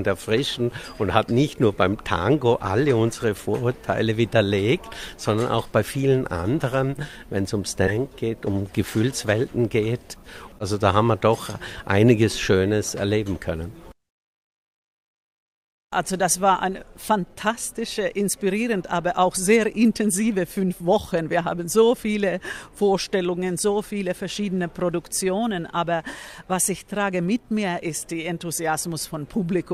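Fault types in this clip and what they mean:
Skip ahead: At about 7.87 to 7.89 s playback jumps forward with no gap filled in. Roughly 0.4 s of audio is dropped and the two sides are joined almost directly, as when a receive buffer discards queued audio to catch up.
Jitter buffer speed-up: From 7.97 to 9.80 s the audio plays at about 112% speed with unchanged pitch. Short pitch-period-length pieces are cut repeatedly, removing around 0.2 s in total, so the passage sounds hurried as buffered delay is drained.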